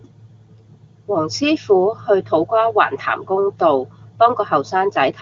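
Speech over AMR wideband HD Voice, with no faults heard.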